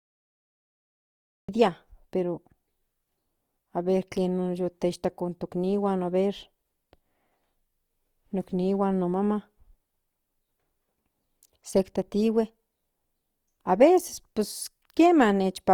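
The clip opens on dead digital silence until 1.49 s, where the speech cuts in mid-sound. That's a cut-off start: the recording or stream caught the sound late, so there's no natural onset or fade-in, just an abrupt jump from nothing straight into the middle of it.

From there to the end, the speech carries plainly audible grainy, rough, noisy texture, likely from Opus compression in its music-style CELT mode at a rate that fits roughly 24 kbps. Bandwidth stays full, reaching about 20.2 kHz, but starved bands get filled with noise instead of left empty.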